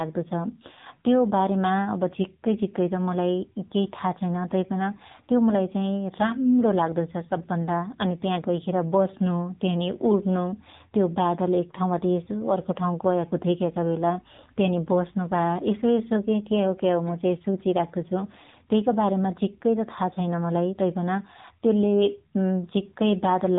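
AMR narrowband mobile codec damage runs through the whole of this speech clip. The spectrum stops dead at about 3.8 kHz, because the codec samples at 8 kHz and rebuilds speech from a vocal-tract model excited by a handful of pulses per 5 ms subframe. The damage is plainly audible as a buzzy, synthetic edge on the speech, which fits a low 7.4 kbps mode starving that model of bits.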